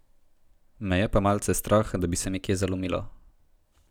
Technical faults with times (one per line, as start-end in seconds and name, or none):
2.26-2.90 drift correction step